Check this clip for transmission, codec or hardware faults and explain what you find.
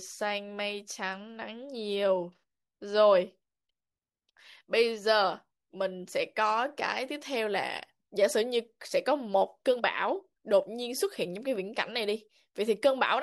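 Nothing turns up on a careful listen through this speech recording, so there's no fault to report here.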